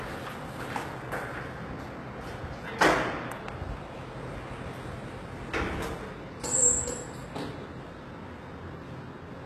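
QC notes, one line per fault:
throughout, HE-AAC compression: the treble sounds gritty and metallic, with nothing above 12.3 kHz. The likely cause is HE-AAC at a bitrate near 16 kbps, where the top band is rebuilt from copied lower bands whose harmonics don't line up.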